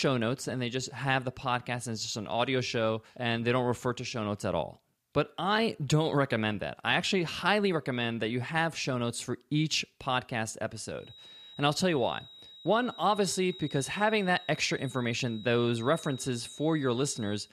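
A loudspeaker-to-microphone loop was likely running right at the edge of feedback, holding one resonance in place without letting it build into a howl. This feedback whistle begins at 10.93 s, just after "notes for each podcast", and continues to the end at 17.53 s. It is a thin, steady tone near 3.8 kHz sitting well below the speech level. The tone swells and fades slowly in loudness as it rides behind the talking.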